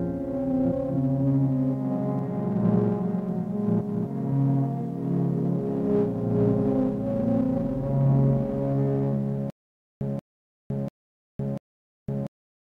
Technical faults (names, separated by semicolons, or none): stutter with silent gaps